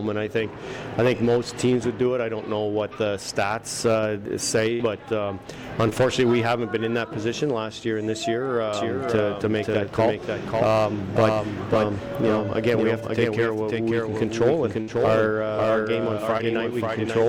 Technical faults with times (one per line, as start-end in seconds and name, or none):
4.73-4.82 burst of packet loss
5.90-5.93 short concealed packet loss
8.73-17.28 doubled audio track
14.81-14.89 burst of packet loss
16.37-16.41 short concealed packet loss